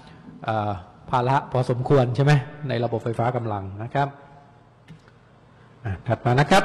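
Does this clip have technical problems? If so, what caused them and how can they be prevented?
Yes. From 2.80 s to the end, the audio drops abruptly to an adaptive stream at a lower bitrate, with no gap. The treble thins, nothing above 15.3 kHz survives, and codec artefacts climb. That sounds like the player stepping down from a decent AAC stream, around 96 kbit/s, to a low-rate HE-AAC one, about 16 kbit/s, when the connection slowed. To prevent it, give the player a bigger buffer or a steadier connection, or pin it to a minimum quality rung.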